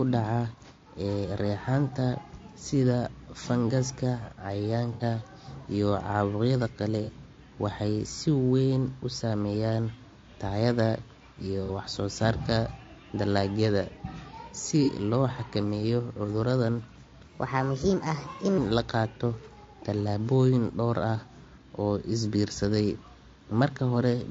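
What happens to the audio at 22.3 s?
At 22.3 s, as throughout the clip, low-delay AAC compression, likely AAC-ELD at a bitrate near 32 kbps, codes about 500 frequency lines a frame with a low-delay window, and at this low bitrate the speech turns rough and grainy with noise between the harmonics.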